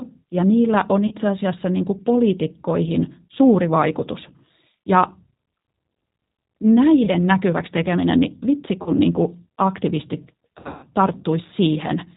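Throughout, the speech carries plainly audible G.729 codec damage. At 8 kbit/s it is resynthesised from a vocal tract filter, pitch predictor and sparse pulses, with nothing above 4 kHz, leaving it slightly rough and synthetic. VoIP packet loss concealed by the speech codec occurs at 1.07 s (40 ms lost), 7.05 s (20 ms), 8.82 s (40 ms) and from 10.59 to 10.86 s, where 200 ms is scattered over 240 ms with runs up to 80 ms. The decoder extends its last pitch and filter with falling gain, so each gap becomes a fading buzzy tone or coloured noise, and weak, distorted sound persists briefly afterward.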